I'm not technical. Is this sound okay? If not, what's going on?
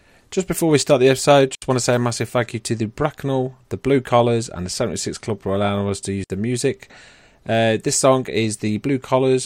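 No. The wireless microphone link briefly lost too much of its signal twice, and the receiver muted itself each time. This is a digital wireless dropout. Instead of crackle or hiss, you get a tiny clean gap of near silence. The first lasts about 70 ms, from 1.55 to 1.62 s, between "we start the episode" and "want to say a". The second lasts 60 ms, from 6.24 to 6.30 s, between "for allowing us to" and "the music".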